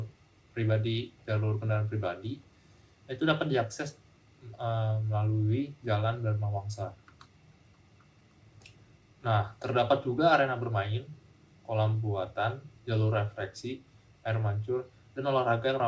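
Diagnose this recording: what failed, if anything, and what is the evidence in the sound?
Nothing failed; no fault is audible anywhere in this recording.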